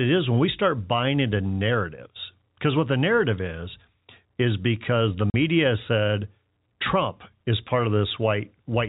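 At 5.3 s, after "is is because the", packets were lost and filled with silence, cutting a 40 ms hole, which fits four 10 ms packets, with hard edges.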